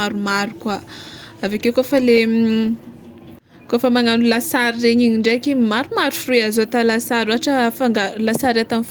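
Listening to the speech recording, nothing technical stood out.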